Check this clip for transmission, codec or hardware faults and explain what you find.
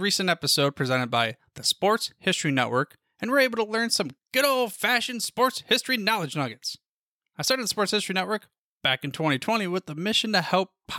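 I found no faults to explain in this clip.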